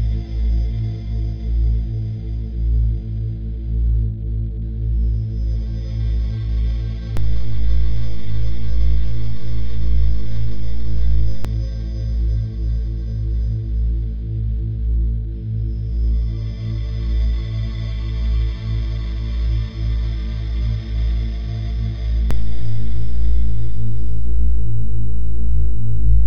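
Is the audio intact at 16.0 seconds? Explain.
Yes, the audio at 16.0 seconds is intact, with no dropout, click, distortion or other fault to be heard at that point.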